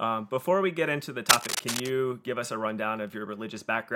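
A speech clip with cable scratch noise from 1.29 to 1.88 s, between "we get into the" and "give us a rundown": dense, ragged crackle roughly as loud as the voice, likely a worn cable or connector being moved. It shows as irregular broadband speckle on a spectrogram and jagged spikes on the waveform.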